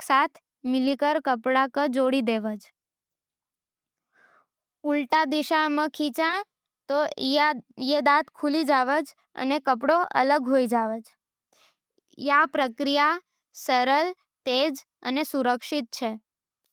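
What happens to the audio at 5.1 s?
At 5.13 to 5.19 s, a lost packet was rebuilt from error correction: about 40 ms of speech, which fits two 20 ms packets, was replaced by the low-bitrate copies carried in the following packets. There is no gap, but that stretch sounds briefly rougher and noisier.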